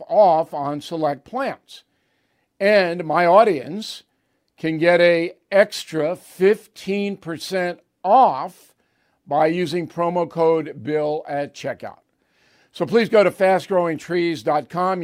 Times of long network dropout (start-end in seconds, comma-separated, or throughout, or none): none